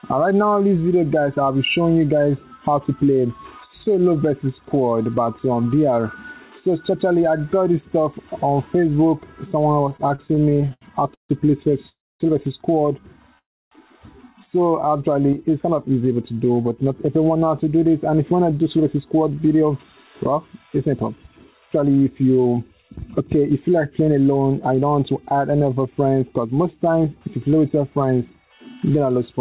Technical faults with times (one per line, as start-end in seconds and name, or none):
9.89-11.32 repeated stalls (stutter)
11.89-12.23 call audio freeze
13.38-13.74 call audio freeze
14.87-15.35 jitter buffer slow-down
16.84-24.16 jitter buffer speed-up